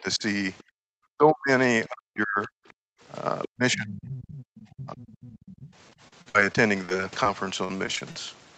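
It's a speech recording from a call, and its whole top end stops at 8 kHz, which fits a wideband Opus stream at around 32 kbps. Right at the start, from 0.01 to 0.23 s, the talker dips by something like 15 dB for roughly a tenth of a second. That's speech suppressed in double talk, most likely the echo canceller hearing both sides at once and ducking everything because it couldn't tell the talker from the loudspeaker echo. The same thing hits much harder from 1.06 to 2.58 s and again from 3.45 to 5.64 s, with the voice sagging by up to roughly 40 dB and losing about a second of level in each stretch. You can also hear the other side's voice leaking through. There's a faint scrap from 0.58 to 0.63 s, sitting roughly 35 dB under the talker, and then a much more obvious run from 3.43 to 5.71 s at around 20 dB down, right on top of that last suppression. That's likely residual loudspeaker sound the canceller didn't fully remove from the mic. 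Just after the first leak, from 0.63 to 0.78 s, the room tone drops out by about 39 dB for around 150 ms. It happens again from 2.86 to 3.01 s, by about 40 dB. That's background gated by the echo canceller, clamping the mic while the far end played and then letting go. The last stretch, 5.90 to 8.16 s, has repeated packet loss with that choppy quality. There are something like twenty short holes, the longest about 56 ms, and around 18% of that span is patched over by stretching the previous sound, so it comes out with bits missing.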